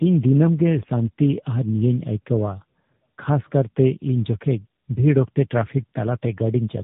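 Tandem speech coding runs throughout: the call was decoded and re-encoded at each link, passing through three different speech codecs in a row, the last consistent with AMR-NB. Each stage compounds earlier damage, leaving the speech rough, muffled and warbly, with nothing above 3.8 kHz.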